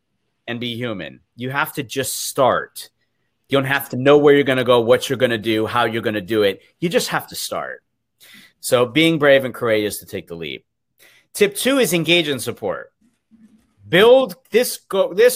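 No technical faults are audible.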